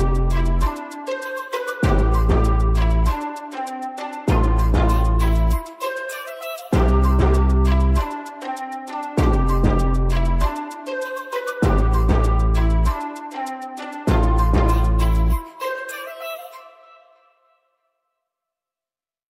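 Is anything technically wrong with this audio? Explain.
No, nothing technically wrong is audible in this recording.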